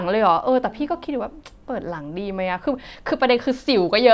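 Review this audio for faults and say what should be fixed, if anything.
Nothing to fix: no dropouts, clicks, distortion or level problems turn up anywhere in the speech.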